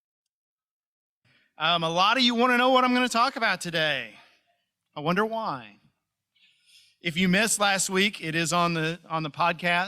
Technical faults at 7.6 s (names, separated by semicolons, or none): none